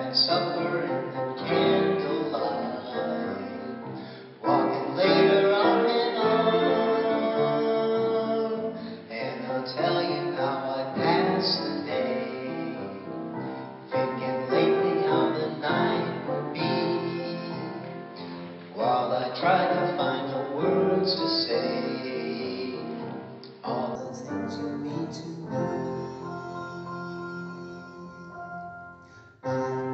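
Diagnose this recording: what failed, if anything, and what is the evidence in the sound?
From the start to 23.95 s the audio is band-limited, with nothing above 5.3 kHz, a fresh noise floor roughly 30 dB down, and a level offset of around 5 dB. At 23.95 s it opens up abruptly with no gap, which points at the capture-device stage: an input switched to a poorer device, likely a narrower microphone or headset path, before returning.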